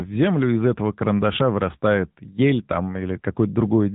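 Across the whole speech clip runs AMR narrowband mobile codec damage: everything above 3.8 kHz is gone, leaving a boxed-in phone tone, and the vocal-tract modelling adds a plainly audible buzzy, synthetic edge that fits a mid-rate AMR-NB mode near 10 kbps. A spectrogram shows a flat ceiling at 3.8 kHz.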